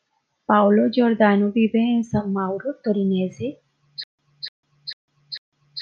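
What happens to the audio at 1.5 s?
Nothing goes wrong at 1.5 s; the speech there plays through intact, with no dropout, click, distortion or other fault.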